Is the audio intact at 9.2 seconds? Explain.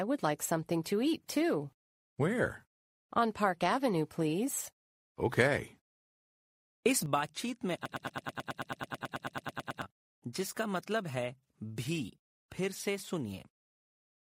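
No. At 9.2 seconds two faults overlap. The first is a sudden gain jump at 7.06 s. The level steps straight down by about 6 dB from one sample to the next, with no ramp, most likely because a gain setting or bit shift was applied all at once. The sound and its background noise drop together and stay lower from there to the end, so at 9.2 s everything plays at that reduced level.

The second is a broken-record loop running from 7.86 to 9.82 s, most likely caused by the player or stream stalling and repeatedly resending the last fragment it held. A piece about 109 ms long repeats back to back, which at that rate makes it cycle around 18 times. The result is a rapid stutter in place of the real audio. At 9.2 s you hear only that repeating fragment, and the material that belonged there is lost.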